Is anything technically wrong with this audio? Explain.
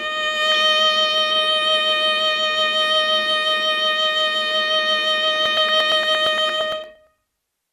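Yes, there are two faults in this music.

From 0.52 to 0.62 s a brief patch of burbling noise rides over the music. This is DAB burbling: weak reception lets a small fraction of bit errors past error correction, so individual sub-bands jump in level, each for up to a frame, across a handful of frames.

From 5.46 to 7.65 s, evenly spaced ticks repeat every 0.115 s, about twenty in all. These are periodic USB or driver dropouts: each time the bus or driver stalls, roughly 10 ms of audio is skipped outright.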